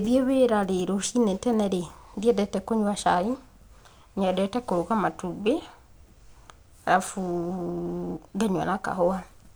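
No technical faults are audible.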